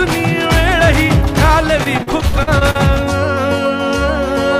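Repeated packet loss (robotic sound) runs from 1.83 to 2.77 s: eight short dropouts, the longest 53 ms, are each patched by stretching the preceding sound, so about a quarter of that stretch is filler and the audio turns choppy with pieces missing.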